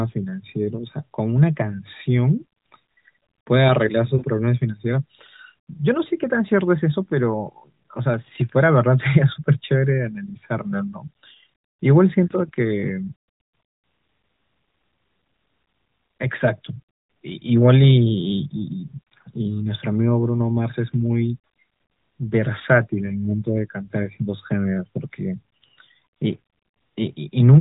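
At 4.18 to 4.24 s, 13.48 to 13.52 s and 23.06 to 23.13 s the speech briefly dips and warbles, then recovers rough for a moment. These are lost AMR speech frames: corrupted frames failed their checks, and the decoder filled the gaps by repeating the last good pitch and vocal tract settings at reduced gain. The first two gaps are about 40 ms, consistent with two 20 ms frames. The third is about 20 ms, consistent with one. All three sit within the 4 kHz bandwidth of the AMR narrowband mobile codec.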